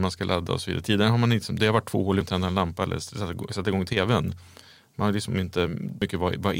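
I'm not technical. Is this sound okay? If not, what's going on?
No. There are two brief glitches in this speech, at 2.21 s, between "varit två hål i" and "att tända en lampa", and again at 6.02 s. Both are damaged data in a compressed stream: part of the file is wrong, so the player briefly misreads it, loses its place and has to find the next good chunk. That produces a short chirp, squawk, click or brief gap.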